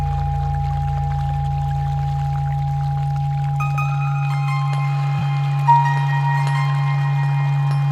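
At 5.19 to 5.21 s, AAC frame loss with concealment: roughly 21 ms, consistent with one lost frame, is filled from prior spectrum, leaving a brief smeared, noisy patch.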